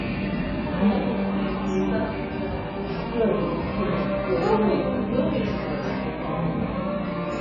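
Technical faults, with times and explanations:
Throughout, AAC compression: the sound is dull and smeared, with a warbling, fizzy texture and nothing above 7.1 kHz. The likely cause is heavy AAC-LC coding at a very low bitrate, fitting about 12 kbps, which cuts the top bands and coarsely quantises everything else.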